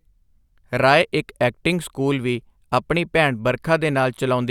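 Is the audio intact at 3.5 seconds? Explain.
Yes, the speech at 3.5 seconds comes through intact, with no dropout, glitch or distortion at that point.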